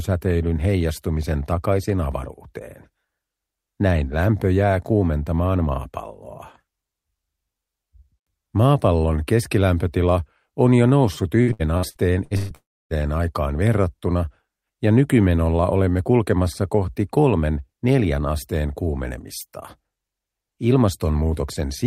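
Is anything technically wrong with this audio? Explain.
Yes. From 11.41 to 12.52 s there is repeated packet loss, with a robotic sound. Six gaps, the longest about 124 ms, were each patched by extending the preceding audio. About 38% of that span is concealed, so the sound turns choppy and robotic, with pieces missing.

From 12.55 to 12.93 s there is a long dropout, likely a network dropout. About 360 ms of audio never arrives. The receiver stretches the last sound into a fading buzz or hiss, then leaves about 290 ms of silence before the audio resumes without the lost section.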